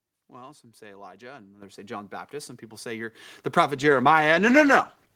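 At 1.62 s and again at 3.15 s the microphone volume stepped up: the call software judged the input too quiet and raised the device gain in a single jump, by about 10 dB and then about 7 dB. Voice and background noise rise together and instantly, which separates this from a gradual gain ride or a louder talker.

From 3.76 s to the end the clip suffers a call bitrate drop. The sound points to the encoder being pushed from around 32 kbps down to around 13 kbps, holding its lowest rate for the final 1.07 s, so the audio turns coarser and rough, watery or muffled without recovering. Unlike packet loss, there are no gaps or dropouts.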